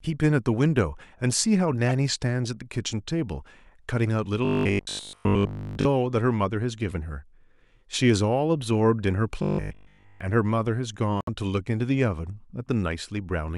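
At 1.89 to 1.93 s there's a corrupt frame decoded: a few damaged frames went through the decoder anyway, so energy lands at the wrong frequencies and you get a brief squeaky blip. From 4.45 to 5.85 s, and again from 9.43 to 10.21 s, the speech turns into a rigid metallic buzz at 50 Hz, which fits a 20 ms buffer being looped. That's robotic sound from repeated short buffers, likely from new audio arriving too seldom, so essentially everything there is repeats. At 11.21 to 11.29 s another corrupt frame decoded spits out a similar short chirp.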